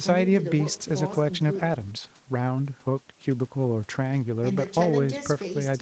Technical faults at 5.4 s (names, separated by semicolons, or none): none